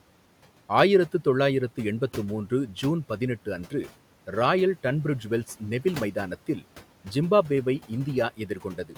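From 8.37 to 8.96 s the noise suppressor mistook the tail of the speech for the room noise, which sits about 21 dB below the speech. This is speech cut by the noise suppressor: about a fifth of a second is pulled down by up to about 12 dB, so the final sounds come out swallowed and faint.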